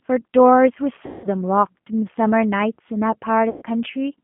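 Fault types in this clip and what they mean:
G.729 codec, throughout: the low-rate 8 kbit/s coder models the speech from compact parameters within a 150 Hz to 3.4 kHz band, sounding plainly rough and synthetic.
VoIP packet loss concealed by the speech codec, 1.06 to 1.28 s and 3.50 to 3.63 s: lost packets are bridged by extrapolating recent frames into a fading smear.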